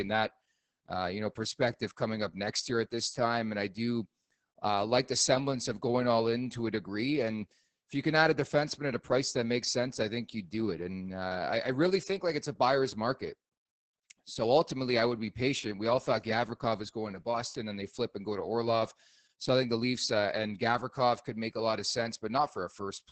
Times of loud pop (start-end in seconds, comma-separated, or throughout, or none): none